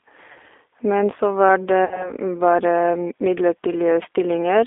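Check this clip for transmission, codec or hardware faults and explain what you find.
Two faults are present: G.729 coding throughout, and three gaps filled by packet loss concealment.

The G.729 codec runs for the whole clip. It rebuilds speech at 8 kbit/s from a vocal tract filter, a pitch predictor and a few pulses per frame. The line passes only 300 Hz to 3.6 kHz. The damage is plainly audible as a thin, rough, synthetic tone.

VoIP packet loss concealed by the speech codec occurs at 0.32 to 0.38 s, 1.85 to 2.12 s, and 4.03 to 4.07 s. About 40 ms, 60 ms and 20 ms of audio are missing. The middle gap falls between "så var" and "bare m". The decoder stretches its last pitch and filter, so each gap turns into a buzzy tone or coloured noise that fades. Distortion lingers briefly after packets return.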